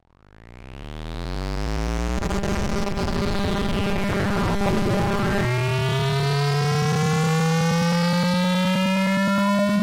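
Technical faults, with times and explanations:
2.18 to 5.47 s, robotic sound from repeated short buffers: the sound flattens into a stiff, metallic 200 Hz buzz that still roughly tracks the shape of what's underneath. The likely cause is audio arriving too slowly, so the playback side keeps looping the last chunk, about 5 ms given that buzz pitch, while the real material gets skipped. With roughly half the audio in that stretch made of repeats, the loop rate imposes its own fixed buzz.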